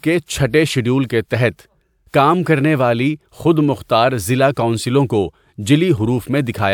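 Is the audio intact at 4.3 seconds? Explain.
Yes, the audio is intact at 4.3 seconds, with no fault present at that moment.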